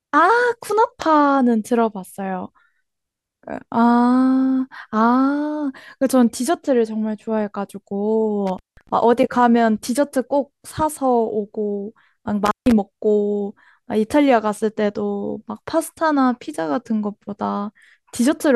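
At 8.47 s and again at 12.46 s the speech drops out for about 0.18 s and 0.15 s, with crackle at each edge: an intermittent contact, a loose plug or cable briefly opening. The crackly edges and faint hiss underneath distinguish it from a clean digital dropout.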